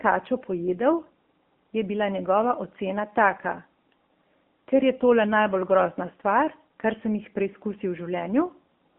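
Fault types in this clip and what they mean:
AMR narrowband mobile codec: The speech sounds thin, boxed-in and plainly buzzy, with the band held to roughly 200 Hz to 3.4 kHz. A low-rate mobile speech coder rebuilds each short frame from a vocal-tract model and sparse pulses, which fits AMR-NB at around 7.4 kbps.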